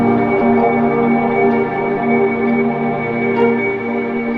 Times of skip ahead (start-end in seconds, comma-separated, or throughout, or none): 0.41-0.43